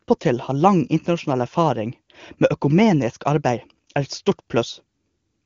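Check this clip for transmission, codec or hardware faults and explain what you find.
No faults turn up in the signal: the speech has passed through the AMR wideband (HD Voice) codec at a quality that fits its top rate of 23.85 kbit/s, and its content stops near 7.3 kHz, the normal upper limit of that codec's bandwidth.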